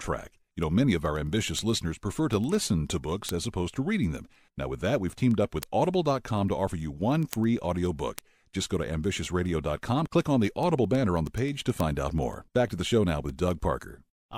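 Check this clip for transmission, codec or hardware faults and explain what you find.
The clip has one hardware fault. Word clock ticks run from 0.20 s to 14.36 s, roughly ten per second and about 150 in all. An unlocked receiver drifts against the sender by around 200 ppm, slipping one sample each time. The result is sharp ticks of uneven strength. A spectrogram would show evenly spaced thin vertical broadband lines, and the waveform would show single-sample discontinuities.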